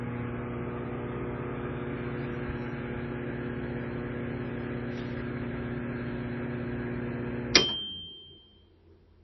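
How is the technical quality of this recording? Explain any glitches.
The technical quality is poor. Heavy lossy compression damage is plainly audible throughout. This is likely MP3 compression at a very low bitrate, around 24 kbps. Nothing remains above 5.9 kHz, so the sound is dull and muffled. The encoder ran short of bits, dropping the treble and switching weak frequency detail on and off frame by frame. That leaves a watery, swirling texture and smeared attacks.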